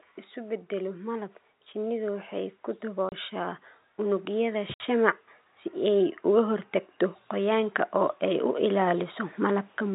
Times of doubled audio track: none

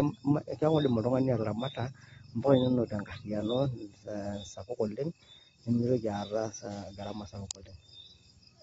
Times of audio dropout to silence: none

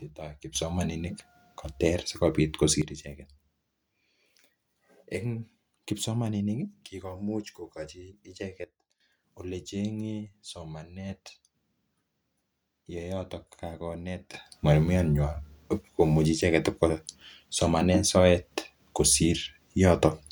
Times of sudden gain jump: 0.55-2.82, 8.64-9.00, 14.34-20.32

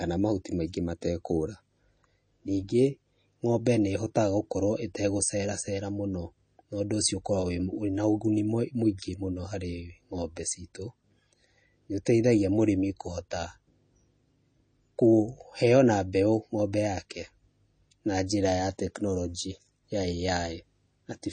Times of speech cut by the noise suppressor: none

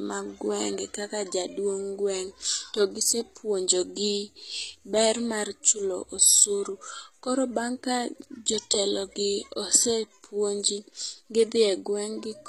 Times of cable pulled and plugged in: none

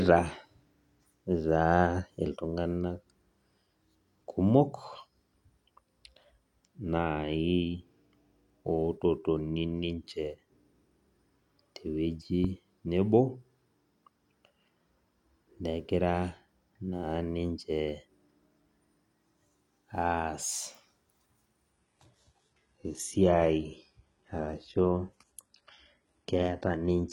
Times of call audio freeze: none

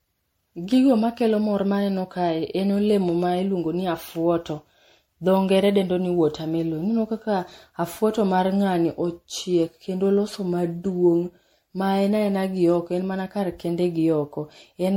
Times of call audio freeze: none

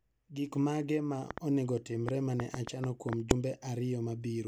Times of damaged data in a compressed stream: 3.31

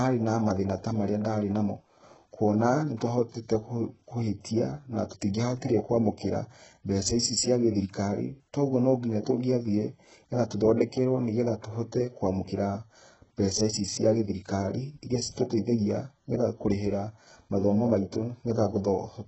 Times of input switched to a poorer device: none

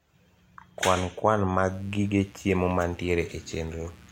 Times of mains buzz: 1.69-4.12

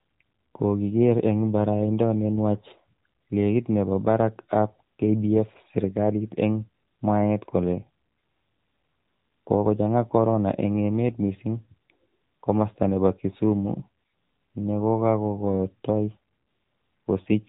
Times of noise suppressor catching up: none

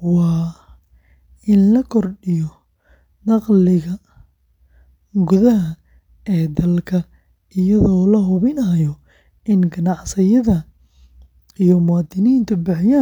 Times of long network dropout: none

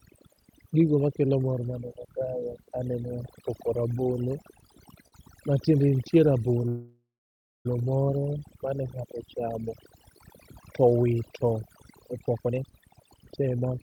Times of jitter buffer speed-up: 12.42-13.83

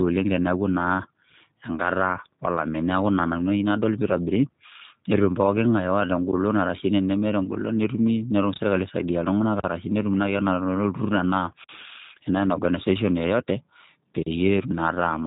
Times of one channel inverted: none

